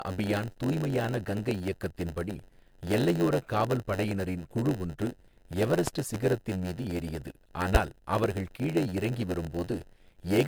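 Throughout the speech there is generation loss. The sound is swirly, smeared and hollow, with blurred attacks. This is more damage than a rate near 100 kbit/s would explain alone, and it points to repeated MP3 encoding, likely around seven passes.

A block size mismatch (padded) is also present for the whole clip. Each block read downstream ends in a stretch of inserted zeros, producing a steady 91.9 Hz buzz. Playback runs at 0.919 of normal speed, about 8% slow, while the timbre stays.

From 5.88 s to 6.18 s, a loud pop occurs twice, peaking about 15 dB above the signal, with the speech continuing underneath. Two sharp impulses like these are likely from a voltage step such as a plug, switch or static discharge.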